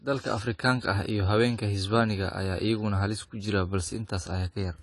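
Speech, with audible AAC compression damage throughout. Nothing sits above 11.5 kHz, and the remaining spectrum sounds thinned and smeared, with a fizzy, warbling edge on sibilants. The likely cause is low-bitrate AAC-LC encoding, with the damage level fitting roughly 32 kbps.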